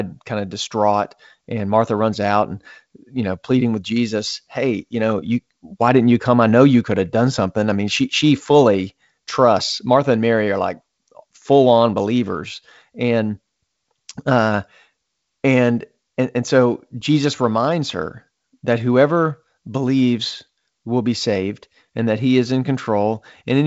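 Speech over a G.722 wideband telephone path at 56 kbit/s with nothing above about 7.8 kHz, and no technical fault to report.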